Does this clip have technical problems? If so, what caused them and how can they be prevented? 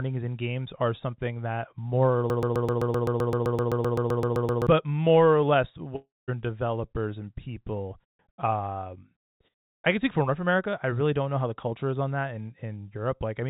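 Yes. From 2.3 to 4.67 s there is a broken-record loop, most likely from a stalled player, encoder or stream that kept resending the last fragment it held. The sound is a 129 ms slice repeated exactly, back to back, 18 times, giving a stuttering machine-gun effect for over two seconds. Whatever should have played during that span is simply gone. Adding stall detection with a watchdog that flushes or mutes a buffer that is not advancing, rather than replaying it, would prevent this.

At 5.96 s a long network dropout begins, likely caused by packets failing to arrive for about a third of a second. The receiver filled the gap by extending the last sound as a buzzy or hissy tail that fades out, and the final 190 ms goes silent before the audio resumes at 6.30 s. The 320 ms of audio missing in between never returns. The sound is band-limited with nothing above 4 kHz, as expected of the G.711 mu-law call path. 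A more stable network link, or a jitter buffer deep enough with retransmission or redundancy to cover gaps of this length, would prevent it.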